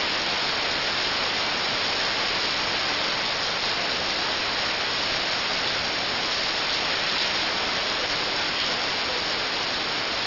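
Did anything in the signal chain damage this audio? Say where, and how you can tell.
Yes. Aliasing runs throughout, from a sample-rate conversion with no anti-alias filter. High content folds back around 6 kHz as gritty, metallic tones nearly as loud as the signal. On a spectrogram, mirrored energy runs hard up to 6 kHz, which fits a drop from 48 kHz to 12 kHz.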